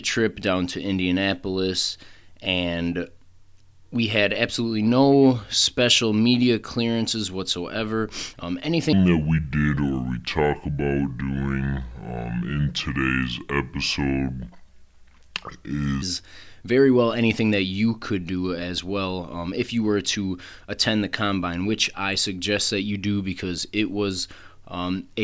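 Speech, with a wrong sample rate fault from 8.93 to 16.02 s: samples are played back slower than they were recorded, with no conversion, which fits 24 kHz audio played at 16 kHz. The section runs at two-thirds speed and drops about 7 semitones, sounding low and dragged.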